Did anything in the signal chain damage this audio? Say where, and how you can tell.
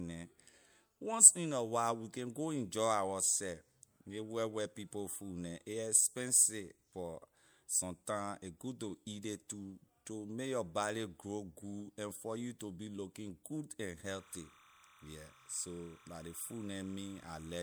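Yes. Timecode bleed enters in the analogue wiring from 14.10 s, right after "be looking good and", to 17.63 s. A chirping warble around 30 dB under the speech, from 29.97 fps linear timecode alternating near 1 kHz and 2 kHz, shows as two octave-spaced spectrogram bands.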